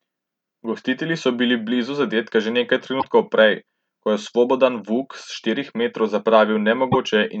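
Around 2.99 s the speech skips ahead and a short glitch runs to 3.05 s, and the same thing happens again from 6.91 to 6.96 s. That's most likely a broken MP3 bit reservoir: frames of about 26.1 ms went missing, and the next ones decoded against the wrong borrowed data.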